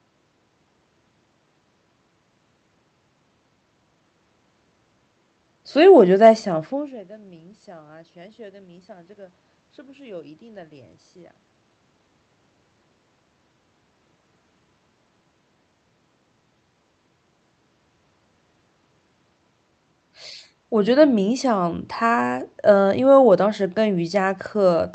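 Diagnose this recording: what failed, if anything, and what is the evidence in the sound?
Nothing failed in this recording, and the sound gives no evidence of any fault.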